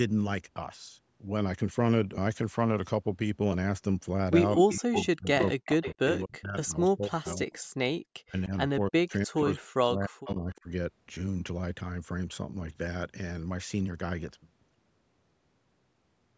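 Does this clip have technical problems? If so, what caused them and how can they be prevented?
Yes. Speech suppressed in double talk occurs from 4.57 to 7.52 s and from 8.27 to 10.68 s. The level dips by as much as about 40 dB, in pieces totalling around two seconds and then about a second and a half. This is likely an echo canceller mistaking overlapping talk for loudspeaker echo and attenuating everything. Prevention: use a canceller with better double-talk detection, or a headset so there is little echo to fight.

An echo leak appears at 4.69–5.06, 5.40–5.49, 5.82–6.37 and 7.26–7.56 s as a copy delayed about 306 ms, and at 10.27–10.61 s delayed about 336 ms. It sits roughly 10 to 20 dB below the main speech. The likely cause is a loudspeaker endpoint whose canceller failed to remove all the echo picked up by its microphone and sent it back. Prevention: have the far end use headphones or lower its speaker volume.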